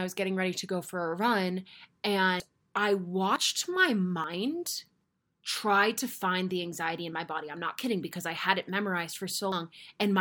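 Speech that jumps abruptly at 2.4, 3.36, 4.24, 5.04 (just before "try to find the") and 9.52 s, each skip cutting out somewhere between a few tens of milliseconds and a tenth of a second, likely dropped buffers from an overrun.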